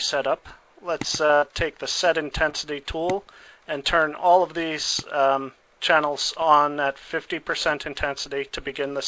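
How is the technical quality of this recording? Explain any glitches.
The recording has three packet-loss glitches, all in the first three seconds. The call path limits the sound to 8 kHz, which fits the G.722 codec.

Short concealed packet loss occurs at 1.26–1.31 s and again at 2.49–2.55 s. Each time, about 40 ms arrived too late. The receiver stretched the preceding sound over each hole, giving a brief smear or wobble.

A burst of packet loss follows at 1.35–1.49 s. About 60 ms never arrived. The last sound is held, then fades as a buzz or hiss. Playback resumes slightly further on, skipping a few milliseconds.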